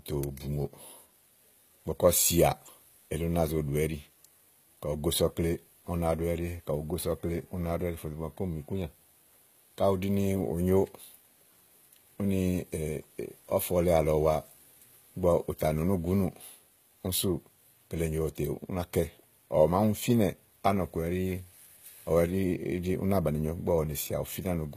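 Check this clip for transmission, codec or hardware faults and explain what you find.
One codec fault runs through the whole clip: HE-AAC compression, likely at a low bitrate near 20 kbps. The encoder codes only the lower spectrum and regenerates the treble by copying lower bands upward, so s sounds turn gritty and lispy, with nothing above 14.9 kHz. Unlike a plain low-pass filter, which leaves the top dull, the treble stays bright but metallic.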